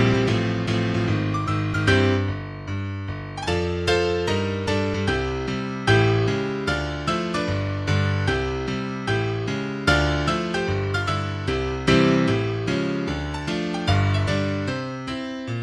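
No technical faults can be heard anywhere in it.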